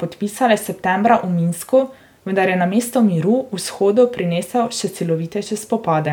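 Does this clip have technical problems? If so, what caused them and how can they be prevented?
No, nothing in this speech recording points to a technical fault, so there is no cause to trace and nothing to prevent.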